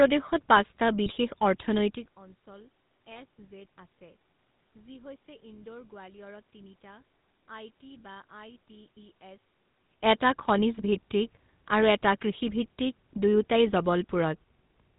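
Throughout, the speech has passed through the GSM full-rate codec, consistent with a 13 kbps stream. The decoder rebuilds the voice from a vocal-tract model driven by sparse pulses and drops everything above 4 kHz. This leaves every syllable plainly buzzy and gravelly, with a coarse, rough edge.

From 1.06 to 1.13 s and again from 3.12 to 3.19 s, GSM bit errors corrupt the decoder's filter, pitch and gain values for a few frames each time, which fits three or four damaged 20 ms frames. Each burst comes out as a brief squawk and gargling pop, with the spectrum bent out of shape. The level change near 2 s between them is the talker moving, not part of either.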